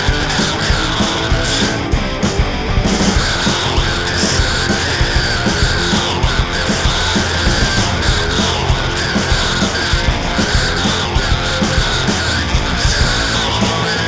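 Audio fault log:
No fault to log; the audio comes over a G.722 call path at 64 kbps, with nothing above 8 kHz.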